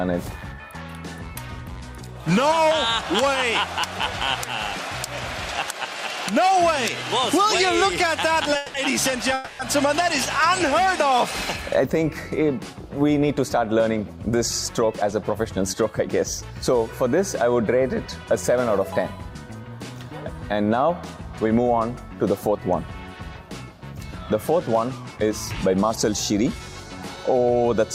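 At 8.56 to 8.76 s and 9.34 to 9.61 s, a call audio freeze stretches the last sound into a fading buzz. Packets were likely held up, so the jitter buffer ran dry. Playback then resumes where it stopped, unlike a dropout, which loses audio. Jitter buffer speed-up follows at 13.25 to 15.74 s (109%, about a fifth of a second trimmed), 25.16 to 25.31 s (135%) and 25.75 to 27.24 s (109%). The audio hurries at unchanged pitch, unlike a resampling error, which would raise it.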